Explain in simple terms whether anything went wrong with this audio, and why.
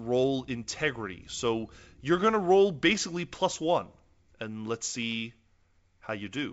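Nothing went wrong: the speech has simply passed through ordinary G.722 wideband telephone coding, which leaves at most a faint trace, and no faults can be heard.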